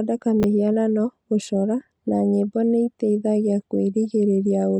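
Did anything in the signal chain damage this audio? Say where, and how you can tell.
Yes. Between 0.40 and 0.44 s the speech jumbles briefly, the mark of chunks out of order at the buffer stage: one 10 ms block plays three blocks late, leaving three hard joins. Unlike a dropout, no audio goes missing; it is only reordered.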